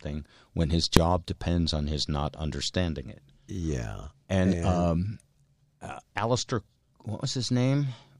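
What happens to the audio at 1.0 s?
Just before 1.0 s, at 0.97 s, between "when his" and "depends on his not", there is a single loud bang from invalid numbers at full scale. A calculation went infinite or invalid and the output was pinned at maximum for about 1.5 ms, which fits a 64-sample block.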